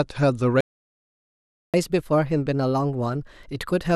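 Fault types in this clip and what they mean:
Playback stall, 0.61 to 1.74 s: The speech cuts out in mid-flow and the output falls silent for about 1.13 s before the sound resumes. The most likely cause is that the player ran dry of buffered data or its audio thread was held up, so it had nothing to send to the output until the data flow recovered and playback could continue.
Catch-up at higher speed, 1.74 s to the end: Right after the stall, the speech plays at 1.15 times normal speed and sits about two semitones higher in pitch. The player is working through the backlog that built up during the gap, resampling it faster to win back the lost time. Because speed and pitch rise together, the speech sounds hurried and slightly chipmunk-like through to the close.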